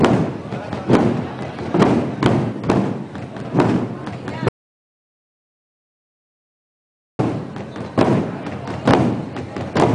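The audio has an audio dropout to silence from 4.49 s to 7.19 s. For about 2.7 s the signal drops to silence, with no room tone underneath, then resumes mid-flow. This is likely an input that disconnected or was muted while the recorder kept writing silence. Whatever occurred during the gap is lost.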